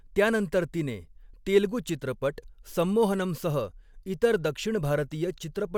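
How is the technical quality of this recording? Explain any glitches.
No glitches can be heard anywhere in this recording.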